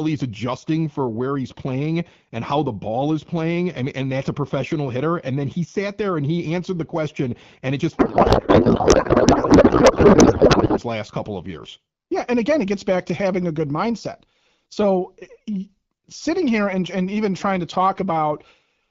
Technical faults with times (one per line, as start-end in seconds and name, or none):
7.97-10.80 codec payload misread